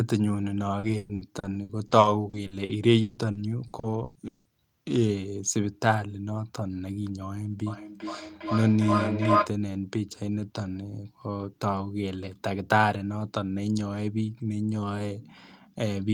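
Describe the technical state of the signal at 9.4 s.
At 9.4 s the signal is in feedback echo between two devices, running from 7.67 to 9.56 s. A second device replays this microphone's sound, which is picked up again. The repeats come back about every 0.4 s, thinner and more ringing, and pile up to about 2 dB above the speech.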